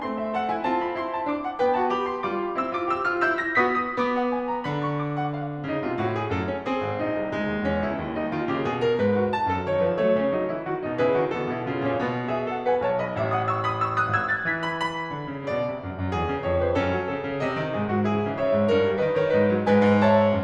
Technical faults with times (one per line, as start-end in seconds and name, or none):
3.52-5.02 imaging from linear upsampling